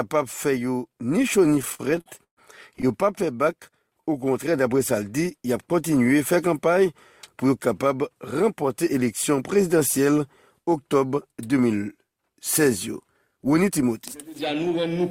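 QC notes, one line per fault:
1.59–2.92 s, repeated stalls (stutter): twelve short gaps where the buffer ran dry and the last sound was stretched to fill them, 303 ms in total, longest 133 ms, so it drags and stutters.
3.26–4.30 s, jitter buffer slow-down: the receiver repeated pitch periods to rebuild its reserve, adding 78 ms, so the audio runs at about 93% speed with the pitch unchanged.
6.47–7.50 s, jitter buffer speed-up: with too much audio queued, short pitch-period chunks got trimmed, roughly 50 ms overall, pushing it to 104% speed with the pitch unchanged.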